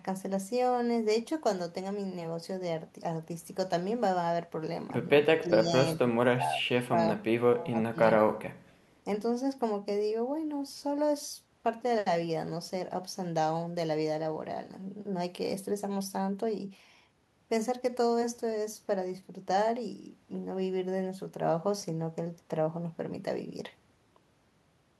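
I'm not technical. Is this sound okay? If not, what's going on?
No. The speech gets pushed down three times: at 5.4–5.72, 5.96–8.02 and 8.2–8.58 seconds, growing deeper each time. This is speech suppressed in double talk, likely an echo canceller muffling the talker while someone else spoke. Unlike a connection dropout, it dips rather than cutting cleanly to silence.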